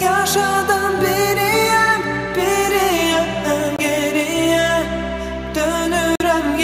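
The audio cuts out abruptly twice, at 3.76 to 3.81 s and at 6.16 to 6.22 s, then resumes as if it had played on underneath. These gaps are likely Bluetooth dropouts, where late packets were discarded, roughly one packet's worth first, then two.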